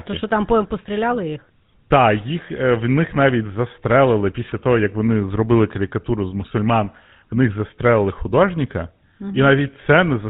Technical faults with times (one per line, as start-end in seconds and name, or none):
0.00-10.29 GSM full-rate codec